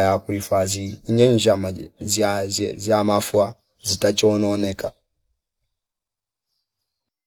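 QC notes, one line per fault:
Nothing stood out on listening, and there is nothing to note for this speech clip.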